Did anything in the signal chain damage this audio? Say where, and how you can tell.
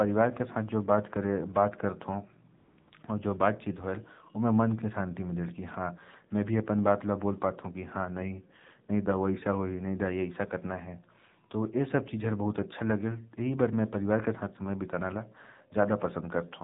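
Yes. The AMR narrowband mobile codec is at the codec stage and runs through the whole speech clip. Nothing above 4 kHz survives, and the voice has a buzzy, synthetic edge that points to one of AMR-NB's lower modes, around 7.4 kbps. Too few bits reach the pulse-driven vocal-tract model to rebuild natural speech.

AMR comfort noise is at the call-processing and codec stage, from 2.58 to 2.78 s, 2.80 to 2.88 s and 2.90 to 2.92 s (200, 80 and 20 ms). Over these spans the real background gives way to smooth, steady synthetic noise that switches in and out, because the sender judged the sound silent and stopped sending speech frames.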